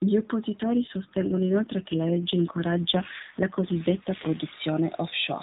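From 0.62 s to 4.44 s the speech turns rougher, buzzier and more synthetic, then recovers its earlier clarity. This is an AMR rate drop: the sound points to the narrowband mobile codec falling from about 12.2 kbps to a mode near 5.9 kbps, with fewer bits modelling the voice. On a spectrogram the 4 kHz ceiling and the waveform stay continuous, with no gap, but the harmonic striations blur and smear through that stretch.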